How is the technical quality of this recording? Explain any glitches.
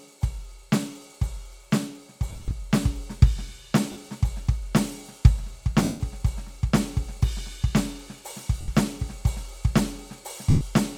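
The music is interrupted by five brief dropouts where tones turn into a noisy smear, at 2.29–2.51 s (short gaps spread over about 220 ms), 3.92–3.96 s, 5.83–6.00 s, 8.61–8.68 s and 10.50–10.61 s. These are lost LE Audio frames: the LC3 decoder fills each gap by repeating the last spectrum with randomised signs, which fits 10 ms frames. The light lossy compression underneath shows as the expected slight codec character.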